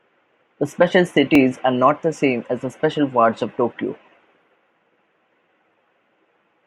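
A speech recording with a single jump at 1.35 s, where the audio jumps forward abruptly with no gap of silence in between. The likely cause is a dropped buffer (overrun): the capture software failed to read a block of samples before the hardware overwrote it, so that short stretch was lost and the material on either side was spliced together. The missing portion is only a few milliseconds, enough to produce the discontinuity.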